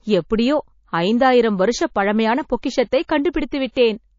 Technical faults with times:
0.00-4.18 MP3 compression
3.72-3.77 pre-echo

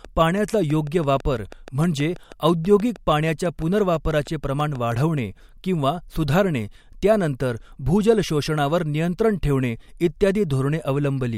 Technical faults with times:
0.05-4.93 train of clicks

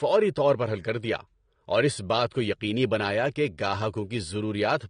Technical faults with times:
0.00-4.90 AAC compression

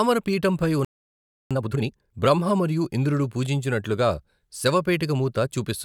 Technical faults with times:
0.85-1.51 playback stall
1.51-2.15 time-compressed catch-up

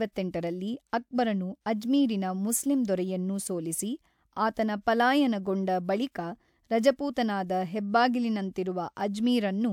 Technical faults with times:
none

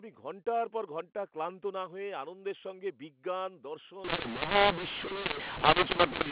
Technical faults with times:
4.04-6.32 mu-law and A-law mixed up

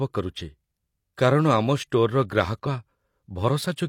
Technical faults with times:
0.36-0.42 damaged data in a compressed stream
2.62-2.67 damaged data in a compressed stream

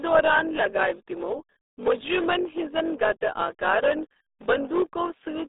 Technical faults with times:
0.00-5.48 block size mismatch (padded)
0.00-5.48 RealAudio 14.4 codec

